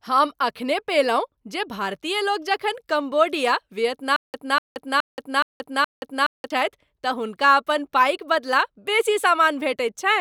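From 4.16 s to 6.50 s the speech falls into a stutter with silent gaps: a 244 ms fragment plays five times, each followed by about 177 ms of digital silence, returning every 420 ms. The likely cause is a stalled player or stream replaying its last buffer at each retry. The waveform shows identical blocks separated by flat silent stretches, and the spectrogram shows matching columns split by empty bands. The audio that belonged in that span is missing.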